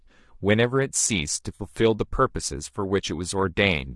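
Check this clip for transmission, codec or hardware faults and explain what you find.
Two faults are present: coding damage across the whole speech clip, and one brief dropout that has been patched over.

Throughout, the speech sounds rough and grainy, and the upper band is thin and somewhat synthetic. This is likely low-delay AAC compression (AAC-ELD). Its short frames cannot separate pitch harmonics finely, so at a bitrate that sounds like about 32 kbps the encoder runs short of bits. Noise fills the gaps between harmonics and the top band is rebuilt coarsely. On a spectrogram the harmonic lines look smudged, with hazy energy between them and a blocky, uniform texture above the lower bands.

From 1.55 to 1.61 s there is AAC frame loss with concealment. About 40 ms of audio went missing, which fits two lost frames. The decoder filled the gap by reusing the last good spectrum with its phases scrambled, so that instant sounds smeared and noisy, like a phasey blur. 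On a spectrogram the harmonics there dissolve into a short smear of noise. The waveform keeps its envelope but loses its periodic shape for those few cycles.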